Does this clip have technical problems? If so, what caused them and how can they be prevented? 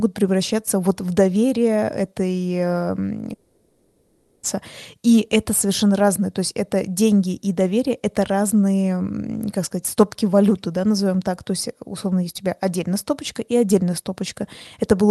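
Yes. From 3.33 to 4.45 s the speech smears into a fading buzz before resuming with a chunk missing, likely a long network dropout that concealment covered. Prevent it with a more stable connection and redundancy such as FEC.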